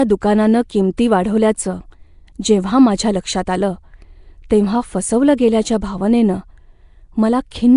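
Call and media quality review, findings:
Rough, hissy halo and smeared, underwater speech throughout. Nothing above 10.6 kHz. Likely Nellymoser compression, a Flash microphone codec. Coarse fixed bits per block; weak bands get noise instead of signal. Damage plainly audible, consistent with roughly 44 kbps.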